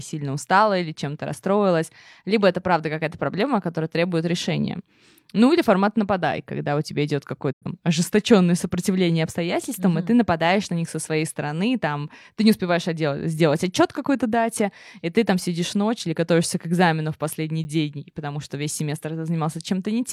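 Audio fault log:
7.51 to 7.66 s, digital broadcast dropout: the speech fades out over about 20 ms, goes quiet, and returns at 7.66 s. The receiver stopped getting usable data, either from losing the signal or because frames failed their checksum, and muted until good frames arrived. About 85 ms of audio is gone, which fits two lost frames. Because the receiver mutes rather than repairs, nothing in the gap can be recovered.
17.64 s, block of digital silence: there is a 10 ms hole where the sound drops straight to silence and comes back with no fade. A block of the output was filled with zeros, as happens when the playback buffer is not refilled in time. The jump to silence and back happens instantly at each edge, and the hole is short enough to be heard as a tick or dip rather than a gap.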